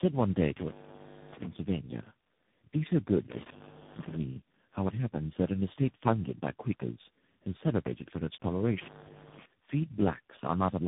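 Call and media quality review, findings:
Tandem speech coding, throughout: the audio was decoded and re-encoded by three speech coders in a row, ending in CVSD-style delta modulation. Each stage degrades the previous one's output, leaving rough, muffled, warbly speech with nothing above 3.7 kHz.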